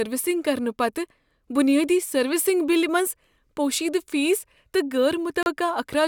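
A speech clip with one dropout near the end: from 5.43 to 5.48 s the sound cuts to about 33 ms of silence and then resumes. This is likely a Bluetooth stall, where interference delayed packets and the receiver's buffer ran empty until retransmitted audio arrived.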